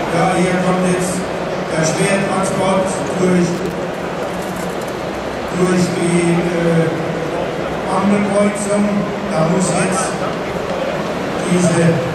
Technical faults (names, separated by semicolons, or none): loose connector crackle